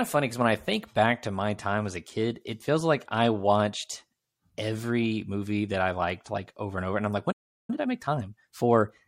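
A playback stall hits at 7.31 s, just after "over and I'm like", and the speech drops out mid-flow until 7.70 s, a gap of about 0.37 s. The output goes dead rather than fading, as if the player likely ran short of buffered data or had its audio thread held up, so nothing reached the output until it recovered and resumed the speech.

Time-compressed catch-up follows from 7.70 s to 8.96 s, where the speech plays at 1.25 times normal speed while keeping its normal pitch. To work off the backlog built up during the stall, the player drops small slices of audio and cross-fades across each cut. The speech sounds hurried until the rate settles back at 8.96 s.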